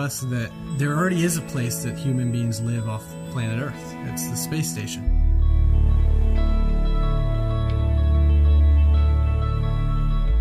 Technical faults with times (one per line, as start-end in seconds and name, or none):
0.70-3.53 USB whine